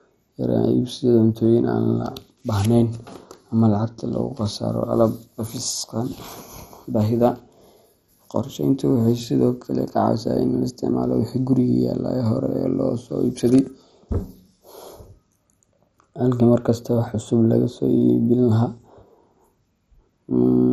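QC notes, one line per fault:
throughout: likely MP2 compression. The speech sounds dull from start to end, with a gurgling, granular distortion. Nothing is heard above 14.5 kHz. This codec divides the signal into 32 equal sub-bands and shares a bit budget among them. When bits run short, the upper bands are switched off and flicker in and out. The bands that remain are quantised coarsely, which gives the grainy texture. The damage is heavy, which fits a low rate near 56 kbps.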